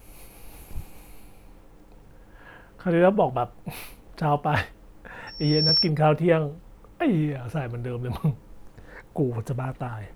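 At 3.77 s, likely a dropped buffer (overrun) loses about 15 ms, splicing the speech together with a jump. From 5.27 to 5.90 s, loudspeaker feedback squeal sets in as the loop gain exceeds one at 5.5 kHz, building over roughly 0.4 s to about 5 dB above the speech. Within it, at 5.69 s, another likely dropped buffer skips a few milliseconds.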